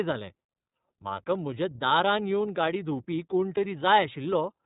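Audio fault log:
Throughout: iLBC codec. Nothing gets through above 4 kHz, so the speech sounds boxed-in and narrowband, with a plainly audible rough, slightly synthetic grain. Each frame's excitation is coded on its own, and the texture fits 30 ms frames at around 13.33 kbps.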